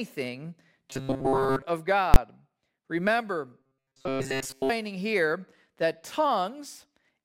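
Speech recording. Audio likely arrived too seldom, so short buffers of about 7.5 ms were replayed in place of skipped audio, giving a rigid 134 Hz robotic buzz from 0.90 to 1.62 s and from 3.60 to 4.70 s, just before "here that". Invalid numbers were pushed to full scale for a 20 ms block from 2.14 to 2.16 s, heard as a single loud bang.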